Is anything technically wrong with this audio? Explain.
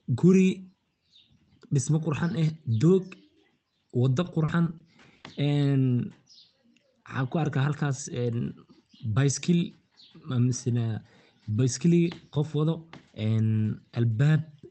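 Yes. From 4.23 to 5.26 s the speech breaks up with repeated packet loss, giving a choppy, robotic sound. Nine short gaps fall across that second, the longest about 40 ms. Each hole was filled by stretching the preceding sound, about 200 ms in total, with roughly a fifth of the span concealed. The rest was simply missing. The audio passed through an Opus call path with content up to 8 kHz, which fits a 24 kbps setting. On a spectrogram the stretch shows smeared, repeated harmonic frames and abrupt vertical breaks. The waveform shows blocky, repeating segments and brief dropouts.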